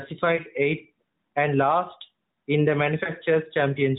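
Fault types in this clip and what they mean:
Lost AMR speech frames: radio errors made two single 20 ms frames fail their checksum, so the AMR decoder replayed the last good pitch and vocal tract settings at lower gain. This gives brief dips or warbles just before "eighth and last in" and after "and last in the".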